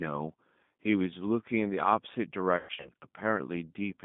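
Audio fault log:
throughout G.729 codec. The speech passes through an 8 kbit/s coder that rebuilds each frame from a vocal tract filter, pitch and a few pulses. The texture is plainly rough and synthetic. The line band runs from 150 Hz to 3.6 kHz, so nothing sits above that.
2.57 to 2.90 s VoIP packet loss concealed by the speech codec. About 180 ms of audio is missing, scattered over 280 ms, with the longest gap near 120 ms. The decoder stretches its last pitch and filter into a fading buzzy tone or coloured noise. Because each frame builds on the last, the speech stays weak and distorted briefly after packets return.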